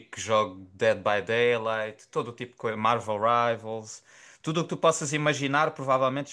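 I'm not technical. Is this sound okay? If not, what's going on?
Yes, the sound is okay; nothing is going wrong with it.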